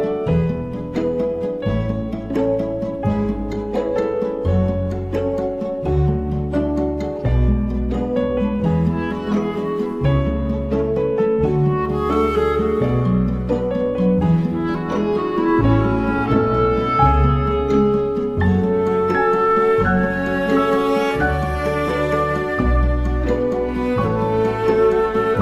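Nothing stood out as a technical fault on listening to this recording.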